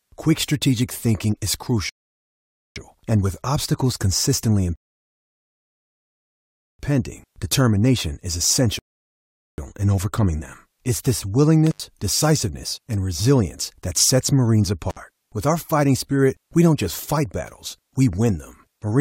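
Speech, interrupted by three rebuffering stalls at 1.89–2.76 s, 4.76–6.79 s (about 2 s) and 8.79–9.58 s: clean silences after which playback resumes exactly where it stopped, with nothing lost. Two intermittent contact dropouts, at 11.67–11.85 s and 14.90–14.97 s, last roughly 80 and 60 ms and are shorter, crackle-edged and faintly hissy rather than silent.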